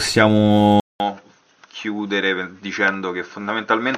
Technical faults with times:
0.80-3.97 input switched to a poorer device

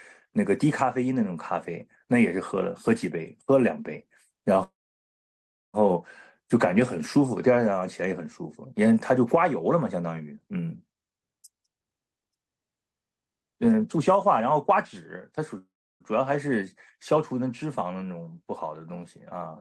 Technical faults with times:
4.63-5.77 call audio freeze
11.12-14.70 jitter buffer speed-up
15.58-16.03 call audio freeze

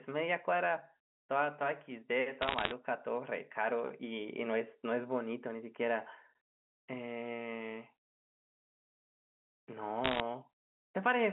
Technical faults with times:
2.42-2.71 bit errors on a digital phone line
10.04-10.20 bit errors on a digital phone line

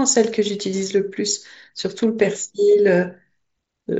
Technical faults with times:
none

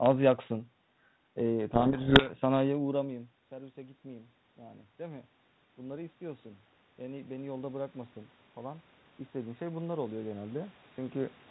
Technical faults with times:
1.70-2.34 codec payload misread
2.92-11.42 automatic gain rising

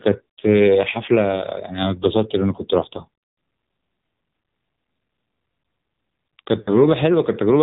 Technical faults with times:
0.00-7.63 AMR narrowband mobile codec
0.92-1.00 lost AMR speech frames
2.56-2.62 lost AMR speech frames
6.62-6.70 lost AMR speech frames

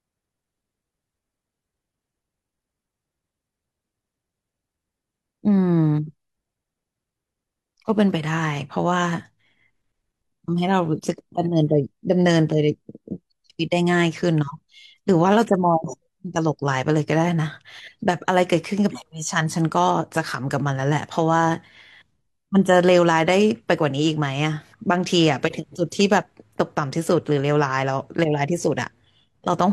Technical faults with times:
none

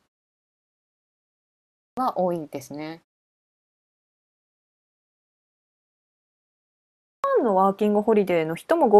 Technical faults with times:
1.59-1.97 clipped start after a pause
4.36-4.78 clipped start after a pause
6.85-7.24 clipped start after a pause

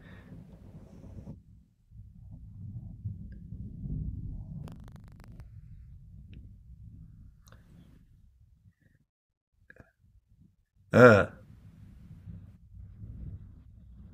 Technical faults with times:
4.60-5.41 buffer tearing

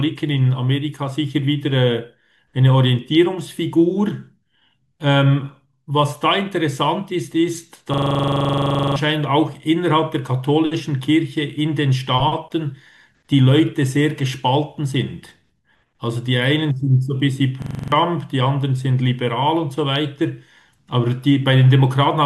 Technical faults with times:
7.94-8.96 system hang loop
17.62-17.92 system hang loop

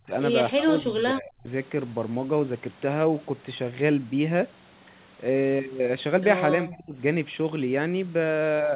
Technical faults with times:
0.00-0.12 speech suppressed in double talk
0.54-1.48 speech suppressed in double talk
6.64-7.00 speech suppressed in double talk

